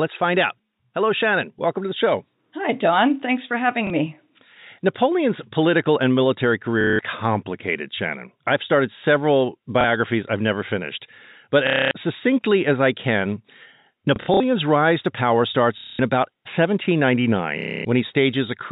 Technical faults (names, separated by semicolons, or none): packet loss with last packet repeated